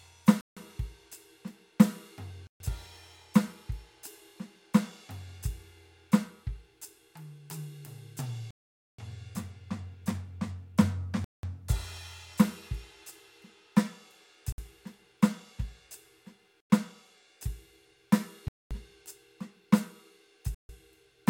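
The music drops to dead silence eight times: at 0.41 s (156 ms), 2.47 s (132 ms), 8.51 s (479 ms), 11.24 s (189 ms), 14.52 s (58 ms), 16.60 s (95 ms), 18.48 s (226 ms) and 20.55 s (146 ms). These gaps are likely Bluetooth stalls, where radio interference delays packets until the headphones' buffer empties. They differ from codec dropouts or clicks because each is a true silence with an irregular length and spacing, not a short burst of noise.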